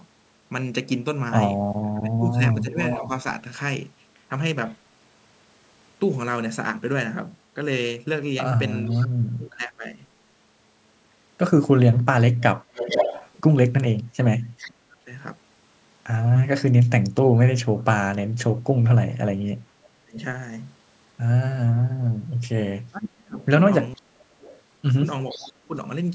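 From 1.82 to 3.1 s, speech is suppressed in double talk. The voice dips by up to about 25 dB, for roughly 0.7 s in total. Both ends were likely talking at once, and the echo canceller could not tell this talker from loudspeaker echo. So it turned everything down.

From 2.83 to 4.73 s comes an echo leak. A copy of the voice returns 463 ms late, about 10 dB below the speech. The likely cause is a far-end loudspeaker whose echo canceller let some of its microphone pickup through and sent it back.

The same 463 ms echo returns faintly from 8.86 to 9.08 s, about 20 dB down. From 9.36 to 9.99 s the voice is pulled down again, by up to about 15 dB for half a second. From 12.4 to 14.66 s the echo is strongest, only about 5 dB under the speech. It overlaps a suppression from 14.31 to 15.09 s that cuts up to about 35 dB.

From 19.77 to 25.75 s the voice drops out in pieces, up to about 35 dB, for roughly 1.5 s in total. 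Inside that stretch, from 23.42 to 25.47 s, a faint echo sits about 25 dB down.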